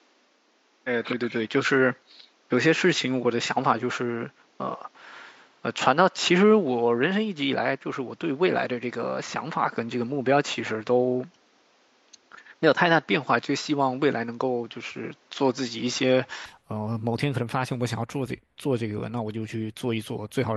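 Input switched to a poorer device, from the start to 16.46 s: the speech is band-limited, with nothing above 7.6 kHz, so it sounds dull and boxy, with a faint noise floor roughly 40 dB under the speech. At 16.46 s the top end returns and the level shifts by about 5 dB, with no gap. The likely cause is the recording input running on a narrower-band microphone or headset path before switching back to a fuller one.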